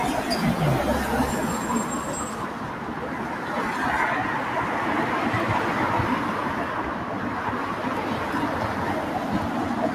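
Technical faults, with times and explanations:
Throughout: noise suppressor applied to sounds. A speech-tuned suppressor treats sustained parts and tails as noise, pulling them down by roughly 5 dB, so the sound pumps and thins.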